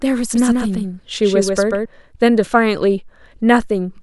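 From 0.36 s to 1.86 s the speech carries a doubled audio track. A second copy of the same signal runs about 150 ms behind the first. It sits roughly 5 dB lower and keeps the full frequency range. It has no reverb tail and no room colour. It sounds like a flat, mechanical slapback. The copy cuts in and out abruptly at both ends. The likely cause is the signal being captured twice, once through a slower path.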